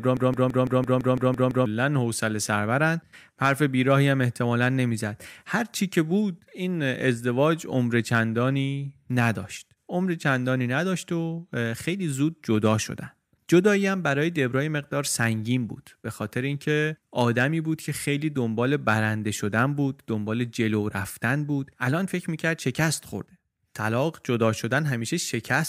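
Speech, opening on a broken-record loop already under way at 0.0 s. A 168 ms fragment repeats exactly, back to back, nine times, until 1.66 s. The effect is a rapid mechanical stutter with no forward movement. Whatever should have played in that stretch is gone. The likely cause is a stalled player, encoder or stream that kept resending the last fragment it held before normal delivery resumed.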